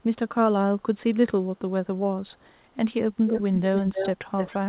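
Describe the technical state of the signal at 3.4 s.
At 3.4 s an echo leak is audible from 3.26 to 3.42 s: a copy of the speech returns 291 ms late, only slightly below the direct speech, likely from incomplete echo cancellation on a loudspeaker endpoint.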